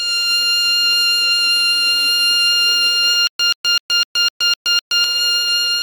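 From 3.27 to 5.04 s the music jerks through seven repeats of a 131 ms burst separated by 122 ms of dead silence: stutter with silent gaps, likely from a stalled stream.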